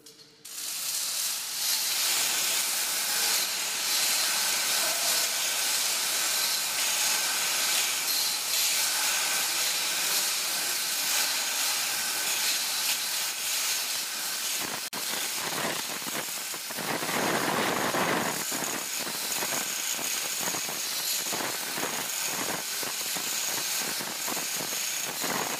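A recording of sounds whose continuous audio briefly drops to silence from 14.88 to 14.93 s, a 48 ms hole with smeared edges, before resuming exactly where it left off. This is a gap at a join of encoded pieces: separately encoded segments were spliced without trimming each encoder's start delay and final-frame padding.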